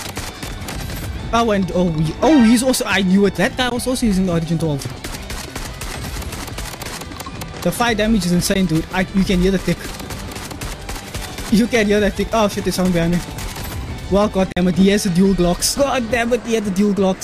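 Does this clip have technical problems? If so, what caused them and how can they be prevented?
Yes. The audio briefly cuts to silence three times: at 3.70 s and 8.54 s for about 15 ms each, and from 14.52 to 14.57 s for about 44 ms. These are likely Bluetooth dropouts. Packets reached the headphones too late, were discarded, and the output muted until good data arrived. The sound then resumed as if it had played on. The short gaps fit one lost packet each and the longer one fits about three. On a waveform they appear as flat holes; on a spectrogram, as thin blank vertical stripes across all frequencies. Keeping the headphones near the source and away from 2.4 GHz interference prevents this.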